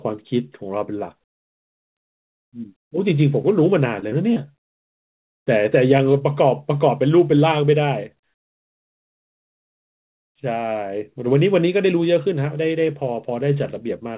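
At 3.42 to 3.45 s the speech gives a brief smear, a small wobble where the sound briefly stretches instead of moving on. This is short concealed packet loss: about 20 ms of audio failed to reach the decoder in time, and the receiver covered the gap by extending what it had just played, voiced sound from its pitch and unvoiced sound as shaped noise, for about 14 ms before blending back into the real signal.

From 3.99 to 4.56 s the sound turns choppy, with small pieces dropping out and a patched quality. This is repeated packet loss (robotic sound): four separate gaps fall within this half-second, the longest about 26 ms, totalling about 80 ms missing. Each hole is filled by carrying the preceding sound forward, roughly 15% of the stretch in all, and the next gap arrives before the audio can settle. The narrow band, with nothing above 4 kHz, fits the G.711 mu-law call codec at 64 kbps the audio passed through.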